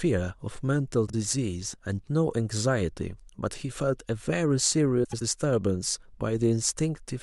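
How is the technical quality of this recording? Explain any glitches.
The recording has two brief glitches, both frames out of order. At 1.07–1.14 s and 5.04–5.22 s, adjacent blocks of about 26 ms and 78 ms (consistent with one and three frames) play swapped, giving a garbled flutter. Waveform and spectrogram show abrupt discontinuities at three joins per event.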